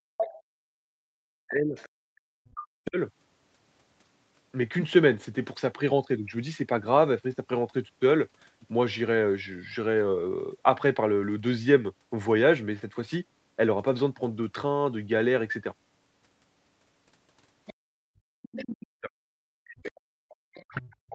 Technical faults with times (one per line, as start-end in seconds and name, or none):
0.00-0.08 background gated by the echo canceller
0.17-0.35 other side's voice leaking through
0.36-2.98 speech suppressed in double talk
1.76-2.59 other side's voice leaking through
17.66-18.75 other side's voice leaking through
17.95-21.14 speech suppressed in double talk
19.86-20.65 other side's voice leaking through